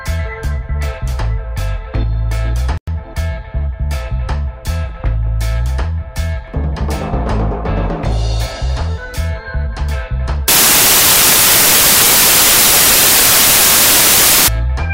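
For the first ten seconds or so the audio plays as expected, but from 10.48 s to 14.48 s it collapses into loud, harsh broadband noise, a classic case of samples built from the wrong bytes. The reader is assembling each sample from misaligned or swapped bytes, so the jittery low-order bits end up driving the big part of every value.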